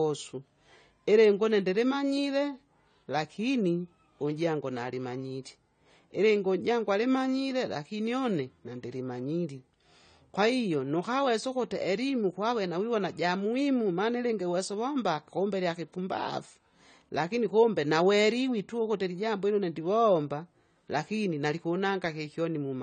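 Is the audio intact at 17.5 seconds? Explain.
No. At 17.5 seconds the speech carries the same AAC compression damage heard throughout the clip: a dull, smeared sound with a fizzy, warbling edge on sibilants. The likely cause is AAC-LC encoding at a rate that fits 32 kbps. With so few bits per frame, the encoder discards everything above 9 kHz and quantises the remaining frequency lines coarsely. A spectrogram shows this as a hard, flat ceiling at 9 kHz with nothing above it.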